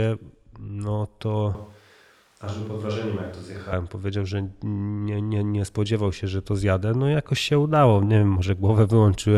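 At 1.55 s the speech abruptly turns roomy and hollow, losing low-end body and dropping around 5 dB in level, while background room noise comes up to sit roughly 30 dB below the voice. At 3.73 s the close, full sound snaps back just as suddenly. This is likely a switch to a distant microphone: the close mic's feed dropped out for those two seconds, leaving a pickup farther away that captures more room and less direct voice.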